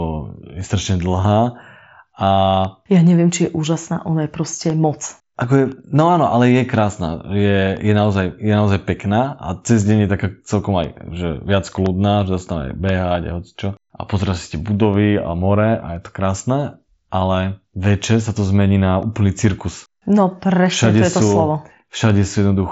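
From 0.61 s to 22.10 s, periodic USB or driver dropouts recur every 1.02 s, about twenty in all. Each time, something stalls the USB link or the audio driver, and a sliver of audio goes missing. Each gap is about half a millisecond long and filled with silence. You hear it as a small, regular tick in the speech. The speech itself reaches only about 7.7 kHz, as the mSBC headset path allows.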